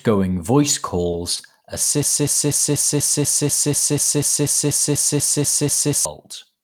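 At 1.11–1.15 s and 1.37–1.41 s, short concealed packet loss: about 20 ms of audio arrived too late each time and was synthesised from the preceding sound, giving brief smears. From 2.03 s to 6.05 s, a broken-record loop: a 0.24 s fragment repeats exactly 16 times back to back, likely a stalled stream resending its last buffer, and the intended audio is lost.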